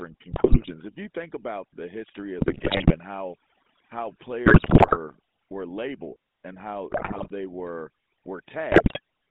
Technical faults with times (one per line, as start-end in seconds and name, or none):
0.00-9.30 overdone noise removal
0.00-9.30 GSM full-rate codec
0.32-0.96 GSM bit errors
2.38-2.97 GSM bit errors
4.46-4.97 GSM bit errors
6.90-7.31 GSM bit errors
8.72-9.00 GSM bit errors